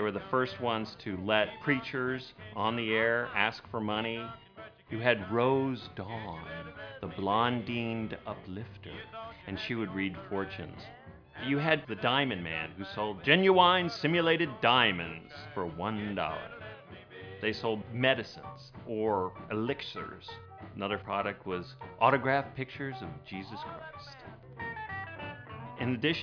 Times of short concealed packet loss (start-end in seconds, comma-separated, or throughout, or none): none